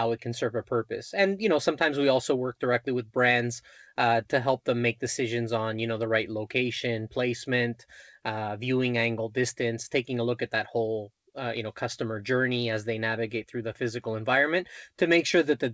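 Nothing stood out on listening to this speech clip, which carries the narrower band of a G.722 call path with no content above about 8 kHz.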